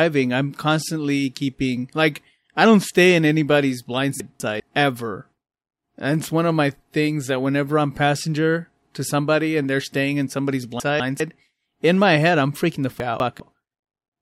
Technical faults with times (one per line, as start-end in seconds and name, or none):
4.20-4.60 chunks out of order
10.80-11.20 chunks out of order
13.00-13.40 chunks out of order